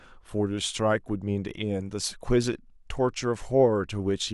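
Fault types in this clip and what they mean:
Nothing in this speech recording stands out as a technical problem.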